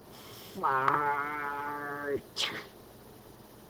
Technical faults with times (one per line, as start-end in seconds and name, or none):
none